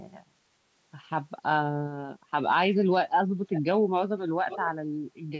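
An echo canceller on a loudspeaker end likely failed to remove everything its microphone picked up, sending it back as echo leak. From 3.46 to 3.62 s and again from 4.49 to 4.69 s, a faint copy of the speech returns about 0.5 s late, about 15 dB below it.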